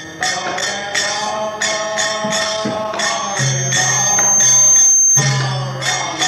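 From 2.99 to 5.24 s, loudspeaker feedback squeal: a 6.3 kHz tone swells over about two seconds to roughly 10 dB above the sound, drawing a bright horizontal spectrogram line.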